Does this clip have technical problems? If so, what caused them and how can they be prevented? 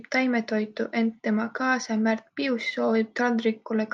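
No, nothing stood out as a technical problem on listening to this speech clip, so there is no cause to identify or prevent.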